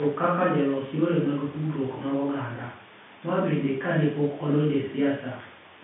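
Speech arrives through a standard telephone-band G.711 path, with content confined to roughly 150 Hz to 3.6 kHz, nothing above 3.8 kHz, and a character that fits a 64 kbps mu-law line, and no fault is present.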